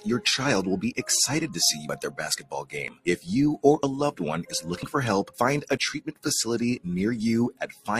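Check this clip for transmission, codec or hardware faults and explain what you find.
Two brief dropouts are audible, at 2.88 to 2.90 s and 6.77 to 6.80 s, each a small skip. Overlap between stream segments, with 1 s segments, makes the player trim 24 and 30 ms of real audio, so the waveform jumps.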